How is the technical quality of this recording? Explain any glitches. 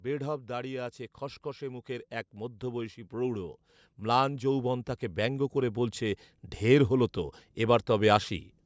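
The recording has one clear problem: a steady rise in level across nearly the whole clip. From 0.05 to 8.34 s, automatic gain rising lifts speech and background together by about 14 dB. The control judged the input too quiet. Unlike compression pumping, the level climbs smoothly and never drops back. The call microphone processing caps the audio at 8 kHz.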